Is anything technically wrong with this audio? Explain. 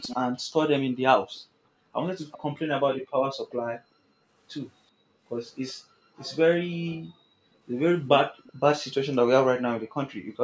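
Yes, there are two faults.

Echo leak: at 0.02 to 0.16 s, 2.31 to 2.38 s and 8.08 to 8.53 s, a faint, delayed copy of the speech trails in behind it, about 386 ms late and roughly 15 to 20 dB below the direct voice. It is brief and scrappy, longest near 8.1 to 8.5 s. The likely cause is a loudspeaker on the far end whose echo canceller let some of the played-back voice leak through its microphone and back into the call.

Background gated by the echo canceller: at 1.47 to 1.83 s, 3.02 to 4.3 s, 4.91 to 7.62 s and 10.2 to 10.31 s, the room tone sinks abruptly and then comes back. The deepest dips are about 39 dB, and the last is shallower at about 13 dB. The longer stretches are hollow for a second or more in all. The canceller clamped down on the microphone while the loudspeaker was playing, then released it.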